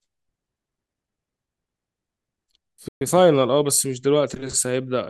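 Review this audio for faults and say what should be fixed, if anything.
A playback stall cuts the speech from 2.88 to 3.01 s, a silence of about 126 ms before the audio resumes. The likely cause is the player running out of buffered data or its output thread being blocked. Prevent it by keeping a deeper playback buffer and giving the audio thread priority over other work.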